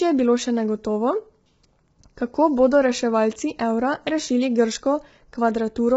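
Throughout the speech the sound is rough and grainy, with a hiss-like noise filling the gaps between the pitch harmonics, and nothing at all above 7.8 kHz. The damage is heavy. This is likely low-delay AAC compression of the AAC-ELD kind used for video calls. Its short frames separate closely spaced harmonics poorly, and the coarse quantisation and lost top band point to a starved bitrate around 16 kbps.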